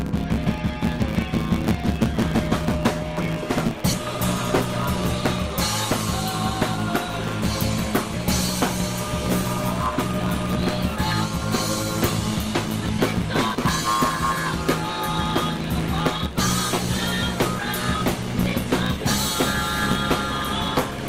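Throughout, a block size mismatch (truncated) discards the end of every block, pointing to 512-sample blocks. This produces a 109 Hz buzz and runs the sound 1.16 times fast at near-normal pitch.

At 3.93 to 3.95 s, a skip ahead drops about a second of audio. Playback jumps forward with no gap, and the two sides are joined directly.

From 12.67 to 13.95 s, a jitter buffer speed-up trims short pitch-period pieces to cut excess delay, removing about 70 ms. The sound runs 5% fast and hurried at unchanged pitch. The same happens from 17.58 to 18.99 s at 3% faster, removing about 40 ms.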